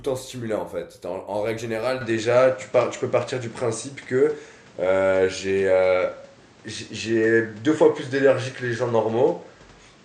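At 2.01 s the speech suddenly loses everything above 9 kHz, shifts level by around 5 dB and picks up a new background noise roughly 30 dB down, with no gap, to the end. That joint change, not bandwidth alone, suggests the input was likely switched to a poorer device.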